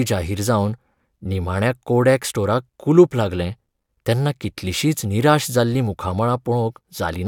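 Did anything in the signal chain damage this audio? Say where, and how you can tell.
Yes. At the converter or analogue input stage, a DC step occurs at 5.74 s, just after "लागलें तेन्ना कितलिशींच निराश". The waveform's zero line jumps suddenly by about -31 dBFS, as happens when a converter recalibrates or an offset input is switched in. The offset then decays away through a 20 Hz high-pass. You hear it as a single low thump under the speech, which itself carries on unchanged.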